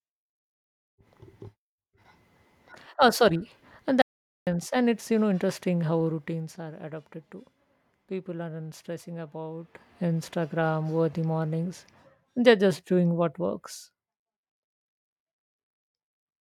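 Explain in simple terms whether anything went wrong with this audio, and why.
Something did go wrong: the incoming signal was briefly lost, most likely because the microphone link or input dropped out or was muted for a moment, while the recording carried on writing pure silence. That audio dropout to silence runs from 4.02 to 4.47 seconds, so nearly half a second of the speech simply vanishes. The sound stops abruptly, leaving dead quiet with no background hiss at all, then snaps straight back in mid-flow.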